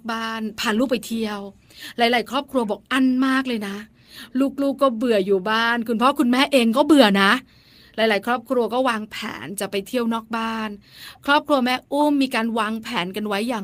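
No technical faults can be heard anywhere in the recording.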